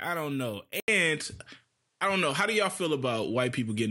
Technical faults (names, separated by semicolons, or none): input switched to a poorer device